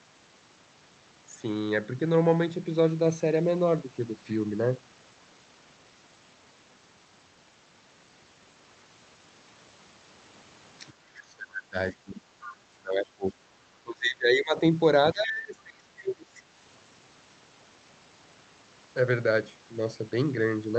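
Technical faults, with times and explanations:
10.91–11.76, 11.93–12.21, 12.79–13.51, 13.69–14.56 and 15.13–16.36 s: speech suppressed in double talk. The voice sinks by about 15 to 25 dB in uneven gulps, likely because the echo canceller mistook overlapping far-end talk for echo and attenuated everything. The waveform envelope caves in, and the spectrogram shows faded, patchy bands.
12.41–12.56 s: other side's voice leaking through. A brief scrap of a second voice, about 20 dB below the talker, slips in, likely residual loudspeaker echo the canceller failed to remove. On the spectrogram it appears as a faint, separate harmonic smear in a gap between suppressed stretches.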